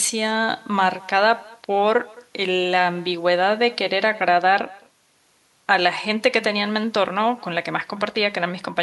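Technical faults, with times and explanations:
Throughout, echo with no canceller: every phrase of the speech is followed about a fifth of a second later by a faint repeat, about 26 dB below the direct sound, thinner than the original. The far end is playing the call over a loudspeaker, its microphone captures that playback along with the room around it, and no echo canceller subtracts it, so the talker's own speech returns after the network round trip as a quiet shadow.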